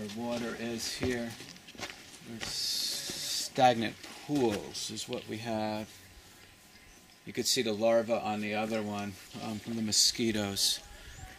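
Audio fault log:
No audible faults found.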